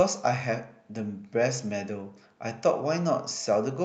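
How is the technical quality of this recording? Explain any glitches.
Nothing here sounds like a glitch; the speech has come through a call connection that limits the top end to around 8 kHz, and that is simply how it was carried rather than anything going wrong.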